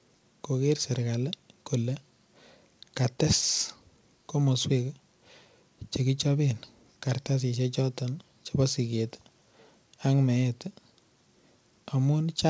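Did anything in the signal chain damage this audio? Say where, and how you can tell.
No, nothing in the chain damaged this speech; it went over a WebRTC call path, and the empty band above 8 kHz is just the normal limit of a wideband codec, consistent with G.722 at around 64 kbps.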